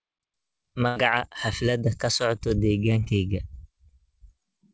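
At 0.88 to 0.98 s a burst of packet loss removes about 80 ms of speech. The receiver stretches the last sound into a fading buzz or hiss, then jumps ahead; unlike a brief concealment, the held tail is long enough to hear, and a stretch of speech is lost. At 3.04 s a shorter, 20 ms short concealed packet loss goes by as a quick smear or wobble. The decoder continued the previous sound and blended back in, too briefly for a held, fading tail. Both gaps sit in G.722 call audio with nothing above 8 kHz.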